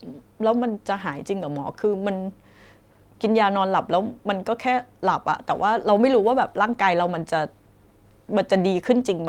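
Nothing in this speech recording stands out as a technical fault at any point.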